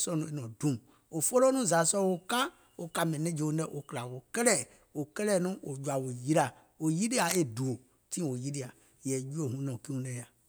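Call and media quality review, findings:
Cable scratch noise, 7.17 to 7.35 s: dense, ragged rustle over the speech for under a fifth of a second, only a few dB below the talker. Likely a worn cable or connector being moved, with contact resistance jumping around and spraying noise into the signal.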